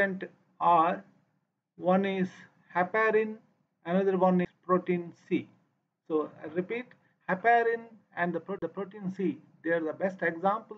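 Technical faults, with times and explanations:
4.45 s and 8.59–8.62 s, CD skip: a brief mute, about 10 ms and then about 40 ms, after which the sound resumes from a different point. Unlike a plain dropout, the material jumps ahead or back by one or more disc turns because the laser landed on another turn of the disc's spiral.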